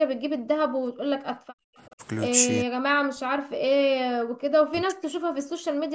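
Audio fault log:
0.00–0.63 s, background gated by the echo canceller: the room sound drops out by about 40 dB while the far end plays, then comes back once the canceller eases off.
0.91–2.02 s, 2.64–3.91 s and 4.10–5.59 s, speech suppressed in double talk: the talker dips deeply, around 40 dB, in chunks, likely because the canceller clamped down while both sides spoke.
1.86–1.91 s, echo leak: a faint scrap of delayed voice, roughly 35 dB under the talker and lagging 384 ms, likely speakerphone echo the far canceller missed.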